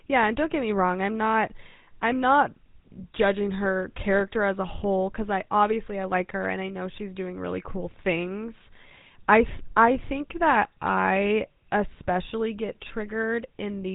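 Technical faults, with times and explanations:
Throughout: GSM full-rate codec. The speech carries a plainly audible buzzy, gravelly roughness from a vocal-tract model driven by evenly spaced pulses, consistent with a 13 kbps rate, and stops above 3.8 kHz. A plain band limit would sound muffled but clean, not grainy.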